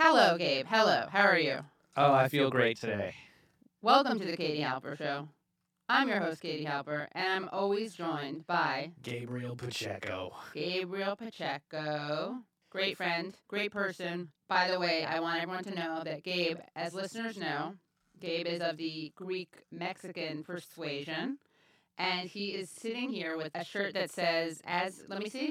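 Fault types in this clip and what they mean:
Channel delay (doubling): One channel runs 40 ms behind the other, and both are summed to mono. The late copy arrives as a separate second voice at equal level. Every syllable sounds doubled, like a tight slap echo. This lasts through the whole clip.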